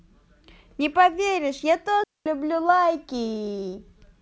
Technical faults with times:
2.04-2.26 digital wireless dropout

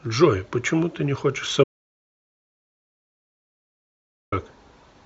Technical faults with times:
1.64-4.32 audio dropout to silence

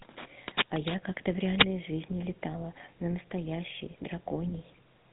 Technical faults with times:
0.00-5.13 GSM full-rate codec

